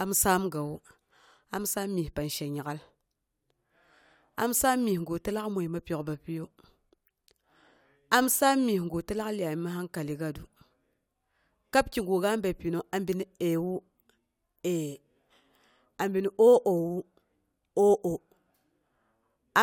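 Nothing in this speech recording stands out as a technical fault; there's simply nothing here to flag.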